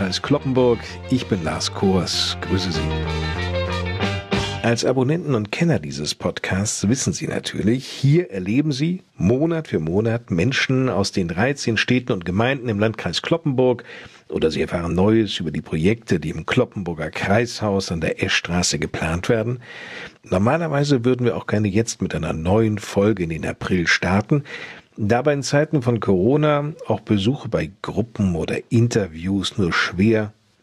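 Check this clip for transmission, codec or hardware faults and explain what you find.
No transmission, codec or hardware faults are audible here.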